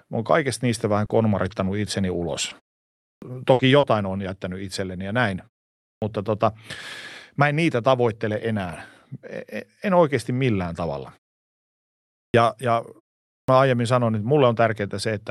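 Just after "oon kaikesta niistä", at 1.01 s, comes the first lost packet rebuilt from error correction: a 20 ms frame missed the decoder, but the next packet carried a low-bitrate copy, so nothing drops out. That stretch turns briefly grainy and noisier. Further rebuilt frames follow at 1.09 s and 1.49 s. Unlike concealment, the sound keeps its real content rather than an extrapolated guess, so it roughens instead of smearing.

Between 1.05 and 1.11 s, a short concealed packet loss fills 40 ms with the decoder's continuation of the preceding sound, pitch-based where voiced and shaped noise where not, before blending back. That is heard as a quick smear or wobble, and a brief consonant can disappear. Where the error-correction frames stay grainy but intact, here the actual audio is gone. The rebuilt frame at 1.09 s sits inside this stretch.

From 2.49 to 3.85 s, ending just before "on jättänyt itselleni ja", repeated packet loss gives the speech a choppy, robotic quality. 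Four separate holes, the longest 60 ms, add up to 180 ms of patched audio, about 13% of the span. Roughly a tenth of a second more comes back through error-correction copies. It is the quick recurrence of patches, not any single one, that makes it sound mechanical.

A clipped start after a pause occurs four times, as the output device wakes too slowly after silence. At 3.00 s, after a 0.48 s pause, about 220 ms of onset is swallowed. At 5.78 s, after 0.37 s of quiet, about 240 ms is lost. At 12.14 s, after a 1.04 s pause, about 200 ms is lost. At 13.27 s, before "aiemmin sanoin niin", about 210 ms is lost. Speech bursts in abruptly, missing its first sounds.

Throughout, the Opus call path limits the top end to around 12 kHz.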